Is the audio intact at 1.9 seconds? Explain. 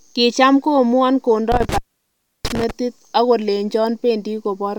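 No. An intermittent contact fault runs from 1.52 to 2.71 s, and 1.9 s falls inside it. A loose cable or plug connection breaks for a moment, so the signal path opens and the audio drops out, here for about 0.67 s in total. Crackle marks the edges where the contact breaks and remakes, and while the line is open a faint hiss remains where the speech should be.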